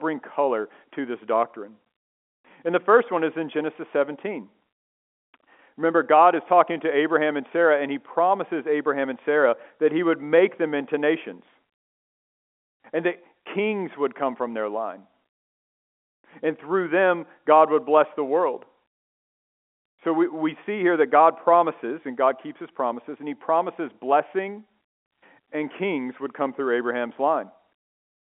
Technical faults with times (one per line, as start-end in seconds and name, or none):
none